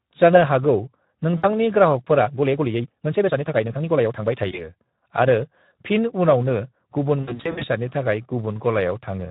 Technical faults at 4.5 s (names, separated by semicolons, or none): Speex codec; VoIP packet loss concealed by the speech codec